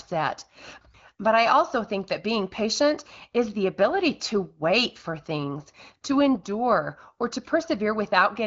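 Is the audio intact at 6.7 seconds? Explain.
Yes, the audio is intact at 6.7 seconds, with no fault at that moment.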